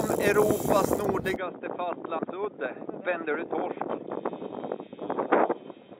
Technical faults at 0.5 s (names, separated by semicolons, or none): none